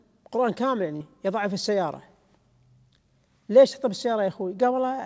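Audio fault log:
0.96–1.03 s, short concealed packet loss: 40 ms of the G.722 call stream never reached the decoder in time, so the receiver synthesised 44 ms by extending the preceding sound, then blended back into the real audio, leaving a brief smear or wobble.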